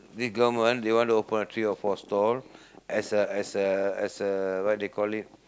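Speech recording with no technical faults to report.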